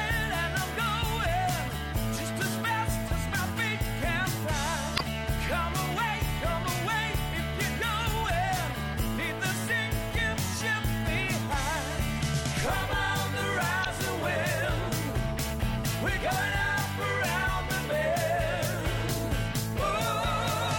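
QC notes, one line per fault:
4.95–5.01 s and 13.81–13.86 s, damaged data in a compressed stream: two short glitches of roughly 60 ms each, where corrupted bytes made the decoder misread those frames and lose sync until it locked onto the next valid frame header.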